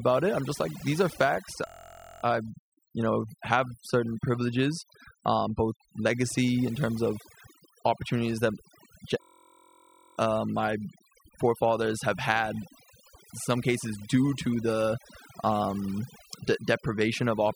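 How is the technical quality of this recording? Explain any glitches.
Technical quality is poor: heavy-handed processing runs through the whole speech recording, and playback freezes into a loop twice.

Overdone noise removal is present from start to finish. The noise reduction was set so aggressively that any frequency band sitting close to its noise estimate is pulled down hard or gated out, taking quieter parts of the voice with it. Between phrases the background drops to near silence dotted with twinkling, chirpy specks. On a spectrogram the noise floor looks scooped out into dark gaps, with isolated bright flecks scattered across it, and the harmonics of the voice appear ragged and patchy.

A system hang loop occurs twice. The first runs from 1.67 to 2.23 s, right after "like these are facts" and before "I you know have". The second runs from 9.22 to 10.17 s, just before "uh my forefathers have". 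In both, the computer or its audio driver stalled while the sound hardware kept replaying the same small ring buffer. A slice about 23 ms long repeats exactly, which fits a 1024-sample buffer. At a loop rate of about 43 Hz this is heard as a steady, rough buzz rather than a stutter. Little or no audio appears to be missing once playback resumes. On a waveform each stretch shows one identical short cycle tiled end to end. On a spectrogram it appears as evenly spaced harmonic lines at multiples of 43 Hz.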